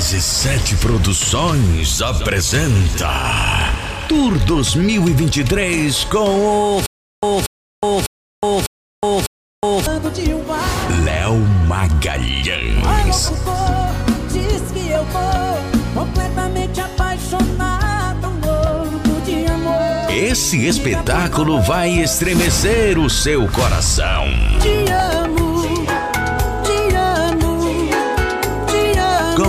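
Between 6.86 and 9.86 s the playback likely stalled and kept retrying, replaying its last buffered fragment each time before running dry: a stutter with silent gaps. The same 234 ms burst of sound returns five times at a steady 600 ms period, each repeat followed by about 366 ms of dead digital silence. Whatever audio belonged in those three seconds never arrives, so the sound jumps ahead when normal playback resumes.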